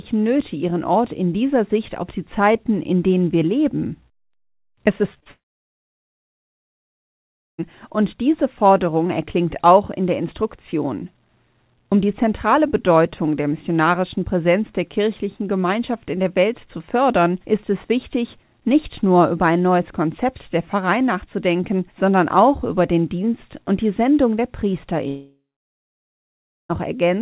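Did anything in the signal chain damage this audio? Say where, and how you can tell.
Yes, at the network stage. Three short concealed packet losses sit back to back at 5.14–5.18, 5.20–5.24 and 5.24–5.27 s. Each gap of about 20 ms is bridged by extrapolated audio that smears the sound before it blends back into the real signal.

Two long network dropouts follow, likely from the connection stalling. From 5.31 to 7.60 s the concealment buzz or hiss fades into about 2.2 s of silence, with the audio resuming at "und diese". A second dropout at 25.08–26.71 s goes silent for about 1.3 s.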